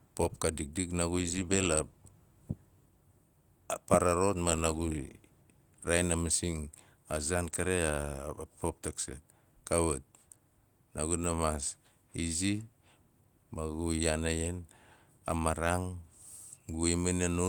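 No technical faults can be heard anywhere in the recording.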